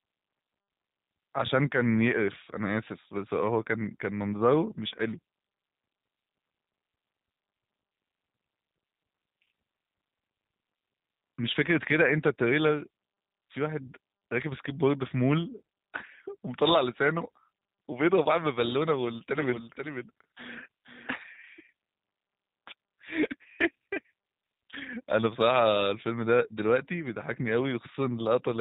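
From the first second to the end, the speech carries plainly audible G.729 codec damage, consistent with an 8 kbit/s G.729A stream. The codec models each 10 ms frame as a vocal tract filter plus a pitch predictor and a few excitation pulses, so the voice comes out band-limited to about 4 kHz, slightly rough and synthetic, with a buzzy, processed edge where the crude excitation fails to match the real waveform.

From 19.38 s to 21.14 s a doubled audio track appears: a second full-band copy of the speech trails the original by about half a second, somewhat quieter, roughly 5 dB down. It carries no reverberant tail or room colouring, and it cuts in and out abruptly at those two points. The likely cause is the same signal reaching the mix twice, once directly and once through a slower path.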